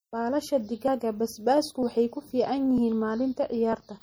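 Across the whole speech clip the sound is watery and swirly, with a dulled top end, smeared consonant attacks, and a metallic chirp around s sounds. This is plainly audible MP3 compression, which fits a low bitrate of around 48 kbps. The likely cause is an encoder starved of bits, cutting the treble at a fixed frequency and dropping quiet frequency detail that flickers on and off from one frame to the next.

At 0.88, 1.83, 2.78 and 3.73 s the speech skips abruptly. Each time, a short slice of sound, around a twentieth of a second, vanishes, and the two sides butt together with no silence between them. The skips arrive every 0.95 s or so, a steady rhythm that points to audio missing between chunks. The likely cause is processing in 1 s blocks that loses a little sound at each handover from one block to the next.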